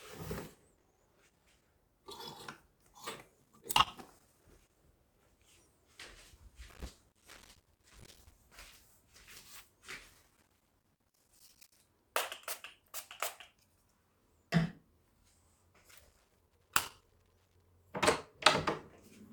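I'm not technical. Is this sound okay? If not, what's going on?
No, there's loose connector crackle: a worn or dirty contact keeps cutting in and out, causing scratchy bursts at 0.77–1.63, 3.42–4.77, 6.69–8.32, 10.10–11.81 and 15.91–17.68 seconds.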